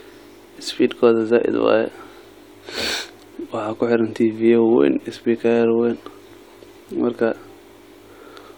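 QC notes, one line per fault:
Nothing stood out on listening to this speech clip.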